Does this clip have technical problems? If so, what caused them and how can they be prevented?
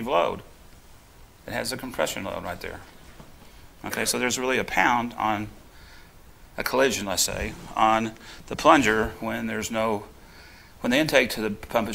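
No technical faults are audible.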